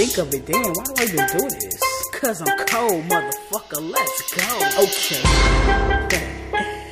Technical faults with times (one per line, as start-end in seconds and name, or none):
none